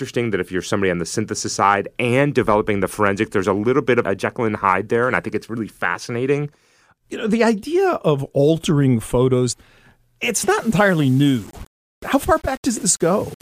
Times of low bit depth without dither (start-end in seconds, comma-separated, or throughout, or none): 10.60-13.41